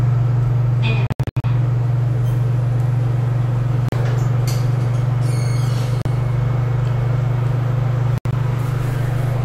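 Silent holes, likely a Bluetooth dropout, break the sound. Between 1.07 and 1.44 s, 261 ms vanishes in scattered gaps. Single 37 ms gaps hit 3.89 s and 6.02 s. Between 8.18 and 8.33 s, 93 ms drops out. Sound resumes as if it played on.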